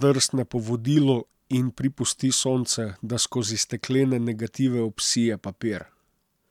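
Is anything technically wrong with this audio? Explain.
No, nothing technically wrong is audible in this recording.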